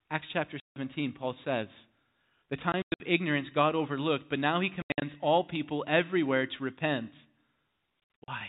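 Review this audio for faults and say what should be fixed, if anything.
Packet loss filled with silence cuts the speech from 0.60 to 0.76 s. The 160 ms hole fits eight lost 20 ms packets and has hard edges. Concealed loss would smooth or repeat the sound, but this gap is silence, quieter even than the faint G.711 telephone noise floor around it. Using forward error correction, or packet loss concealment in place of silence fill, would prevent it.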